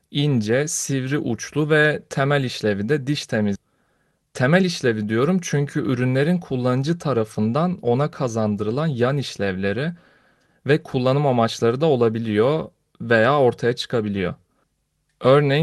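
At 3.55 to 3.66 s there is a skip ahead: roughly a second of speech never plays, because that stretch was dropped while later audio was already queued. The two sides are spliced almost directly, with no gap, so the speech jumps abruptly forward.

From 4.11 to 4.88 s a jitter buffer speed-up follows, as the buffer sheds excess delay by cutting short pitch-period pieces, about 70 ms in total. Speech runs at about 108% with unchanged pitch, sounding hurried, all carried over a call path whose top end stops near 12 kHz.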